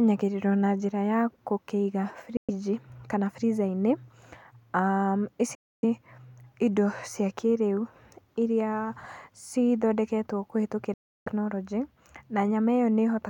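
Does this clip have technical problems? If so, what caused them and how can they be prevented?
Yes. Silent gaps at 2.37–2.50 s, 5.55–5.84 s and 10.94–11.28 s, each breaking off before the speech resumes further along, were likely Bluetooth dropouts from wireless packets arriving too late. Keeping the headphones close and clear of 2.4 GHz interference prevents this.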